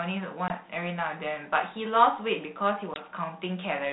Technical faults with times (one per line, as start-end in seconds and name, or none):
0.48-0.51 packet loss on an ADPCM call
2.94-3.04 packet loss on an ADPCM call